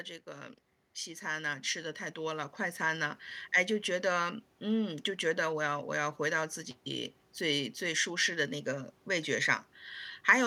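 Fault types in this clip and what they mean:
Automatic gain rising: the level control judged the incoming speech too quiet and pushed its gain up slowly, so from 0.24 s to 3.28 s voice and background noise swell together by about 9 dB over roughly three seconds. Because the background noise climbs in step with the voice, this is a gain stage reacting to input level, not a speaker growing louder or a compressor pumping on each syllable.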